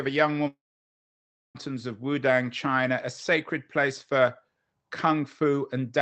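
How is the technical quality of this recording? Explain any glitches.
The recording has one clear glitch: a gap from 0.47 to 1.57 s in the speech. Throughout, the call codec cuts the high frequencies above about 8 kHz. This long network dropout likely starts at 0.47 s, where the last sound stretches into a brief fading buzz and then gives way to nearly a second of silence. Unlike a short packet loss, the missing stretch is never recovered.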